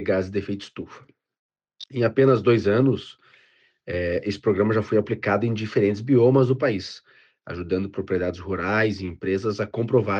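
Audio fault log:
Nothing stood out on listening to the clip.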